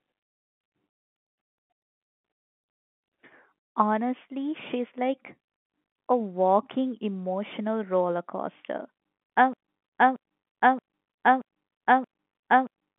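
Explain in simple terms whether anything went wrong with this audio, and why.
Something did go wrong near the end. From 9.53 s to the end of the recording, the audio turns into a broken-record loop: the same stretch of about 0.63 seconds plays six times in a row, back to back and identical each time. This likely happened because the playback or streaming stage stalled and kept resending the last piece it held, so whatever should have followed 9.53 s is missing. The narrow, telephone-like sound before that is normal phone-line coding.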